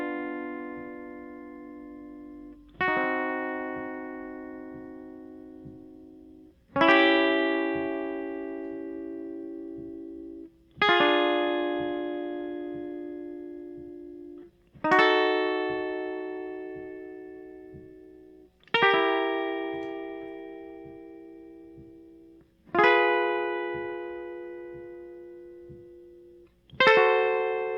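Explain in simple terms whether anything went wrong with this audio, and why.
Nothing went wrong that can be heard: listening to this music carefully, no problem stood out at any point.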